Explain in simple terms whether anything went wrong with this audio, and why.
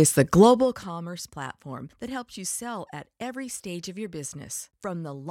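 Zipper noise runs from 0.41 to 0.85 s, just before "platform that helps you". The volume drops in tiny jumps, about 100 each second, instead of gliding.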